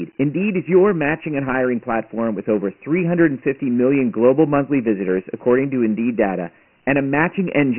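From start to finish the speech carries Dialogic VOX ADPCM damage, the 4-bit adaptive coding used for phone menus and voicemail. Nothing reaches above 3 kHz, which fits the 6,000-sample rate at 24 kbps, and a line band of roughly 150 Hz to 3.6 kHz thins the low end. The coarse step sizes leave a heavy, gritty hiss that rides along with each syllable. On a spectrogram the energy stops flat at 3 kHz, with grainy noise filling the band wherever speech is present.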